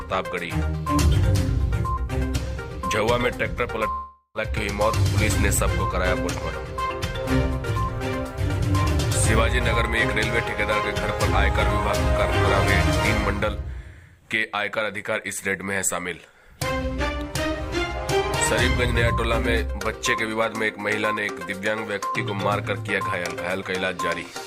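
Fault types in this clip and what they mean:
long network dropout: from 3.91 s the sound smears into a fading buzz for about 0.43 s, then 50 ms of silence, resuming at 4.38 s with 0.42 s skipped. It is likely a network gap. Unlike brief packet loss, the concealment runs out and material is lost.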